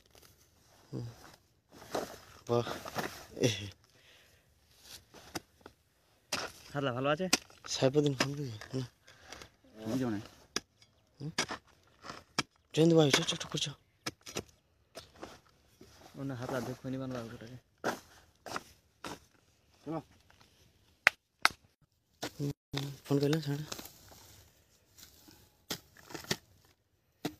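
Digital radio blending to analogue runs from 3.83 s to 9.29 s. The receiver lost its digital stream and cross-faded, over about 280 ms, to the FM broadcast of the same station, then faded back at 9.29 s. During the FM stretch a faint hiss sits roughly 40 dB below the programme, and the level drops by about 1 dB. Each switch is a short cross-fade rather than a hard cut.

A playback stall follows at 22.51 s. The output falls silent for 224 ms, stopping mid-flow, and resumes at 22.74 s. This is likely the player running out of buffered data, or its audio thread being held up, so that nothing was fed to the output until it recovered. The gap is long enough to be heard as a clear dropout rather than a click.

Time-compressed catch-up comes straight after the stall, from 22.74 s to 23.62 s. To work off the backlog the stall created, the player trims small slices out of the audio and cross-fades across each cut. 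The sound runs at about 1.25 times normal speed without any rise in pitch. For just under a second it comes across as hurried.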